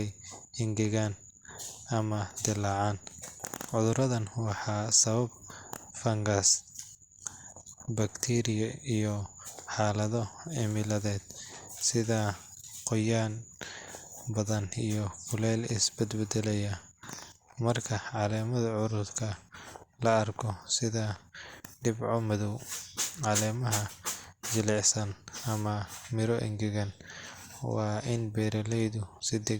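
Speech recording; no technical faults can be heard.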